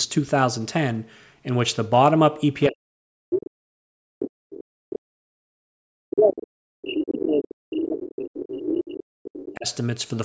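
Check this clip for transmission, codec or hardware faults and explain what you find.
The clip shows echo-canceller trouble on a call, in three forms.

Speech suppressed in double talk runs from 2.69 to 5.11 s and again from 6.05 to 9.67 s. The talker's level sinks by up to around 40 dB, for roughly 2 s in the first stretch and 3 s in the second. The cause is likely both sides talking at once. The canceller could not tell the near talker from the loudspeaker echo, so it pulled everything down.

The other side's voice leaks through at 4.24 to 4.56 s, 6.85 to 7.14 s, 8.01 to 8.94 s and 9.37 to 9.45 s. It sits around 15 dB below the talker, and nearer 20 dB down in the last scrap. It comes in short fragments and one longer run. The far end, played on the loudspeaker, was likely not fully cancelled. Some of it stayed in the microphone signal.

The background is gated by the echo canceller from 5.39 to 5.77 s, about 0.4 s in all. 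The room sound drops by about 40 dB, then comes back. Here the canceller clamped the microphone hard while the loudspeaker played. It released once it judged the echo gone. The result is a brief hole in the ambience. The call's microphone processing passes nothing above 8 kHz, which is normal for this path.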